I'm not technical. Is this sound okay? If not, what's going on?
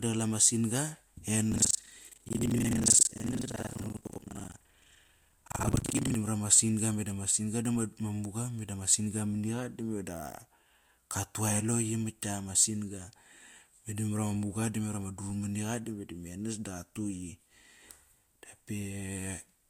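No. Buffer tearing runs from 1.49 to 6.15 s, ending just before "mara ma". The playback software and sound hardware slipped out of step, so about half of every chunk replays sound from roughly a tenth of a second earlier. That causes a robotic buzz at 23.4 Hz, which fits a 2048-sample buffer.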